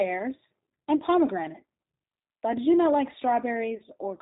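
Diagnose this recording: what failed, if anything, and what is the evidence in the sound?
The codec stage is the first culprit: this is G.729 coding, and the damage is plainly audible across the whole clip. Nothing comes through above 4 kHz, so the speech sounds narrowband and muffled, with that slightly rough, synthetic edge you get when the voice is rebuilt from a vocal tract filter, a pitch predictor and a handful of pulses per frame. The sound fits an 8 kbit/s G.729A link.

On top of that there's network trouble: VoIP packet loss concealed by the speech codec, at 0.97 to 1.02 s and again at 3.77 to 3.83 s. Each gap fits a single lost 30 ms packet. In both spots the decoder keeps extending the last pitch and filter at dropping gain, so the speech is stretched into a short sound that fades. Because each frame leans on the previous one, the voice stays weak or distorted for tens of milliseconds just after each gap.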